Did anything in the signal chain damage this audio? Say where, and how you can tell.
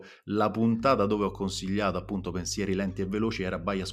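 Yes, mains hum crept in at the analogue wiring stage: a steady 50 Hz tone appears at 0.79 s and runs to the end, around 15 dB under the speech. That points to a ground loop or a nearby transformer.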